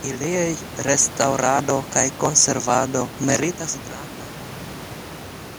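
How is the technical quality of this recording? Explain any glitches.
Nothing stood out as a glitch on listening to this speech recording; the gentle fade-out over roughly the last two seconds and the faint room noise about 17 dB below the speech are ordinary parts of the recording.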